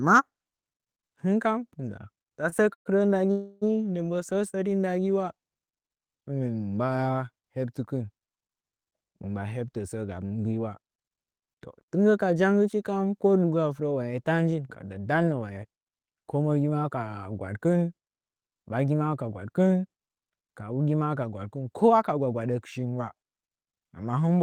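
Speech with delivery faults near the start and later. At 2.49 to 2.54 s a short stall from a late packet holds the last sound for 24 ms, a brief buzzy smear with nothing lost. Two longer call audio freezes follow, likely from packets held up in transit. From 2.74 to 2.87 s the filled sound dies to silence for about 100 ms. From 3.31 to 3.64 s it is stretched for 301 ms without going silent. Both resume where they stopped, unlike a dropout that skips audio. Jitter buffer speed-up occurs at 9.68 to 10.87 s, 15.42 to 16.44 s, 19.06 to 19.39 s and 22.17 to 23.29 s: the speech runs about 10 to 11 percent faster at unchanged pitch, hurried rather than chipmunk-like, with up to roughly 0.15 s trimmed each time.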